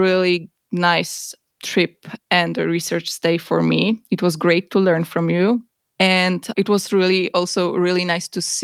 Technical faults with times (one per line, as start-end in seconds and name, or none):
none